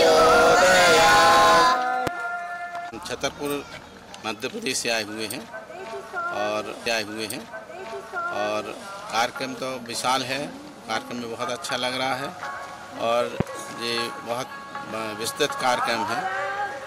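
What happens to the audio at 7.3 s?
At 7.3 s you're inside a stream segment repeated fault running from about 6.85 to 8.85 s. The player queued the same chunk twice, so roughly two seconds of audio play again, with a small blip right where it jumps back.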